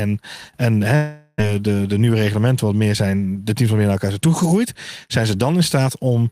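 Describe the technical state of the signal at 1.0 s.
At 1.0 s, a likely long network dropout (0.95–1.42 s) replaces lost audio with a fading buzz stretched from the last sound, showing as smeared harmonics before "de de".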